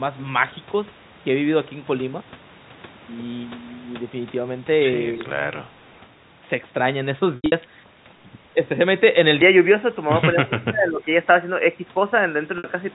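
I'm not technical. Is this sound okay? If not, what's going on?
No. At 5.05 to 5.22 s and 10.34 to 11.07 s, the speech dips and partly cuts out, likely speech suppressed in double talk while both sides spoke.

Around 5.89 to 6.0 s, a very faint, delayed copy of the speech comes back about 0.2 s late. That is likely echo leak.

At 7.36 to 7.52 s and 12.58 to 12.64 s, there is packet loss with pitch repetition. Dropped chunks are patched with a brief held, buzzy sound that fades.

From 9.42 s to the end, the sound turns duller and slightly changes level. There is also a faint new hiss. This is most likely the input switched to a poorer device.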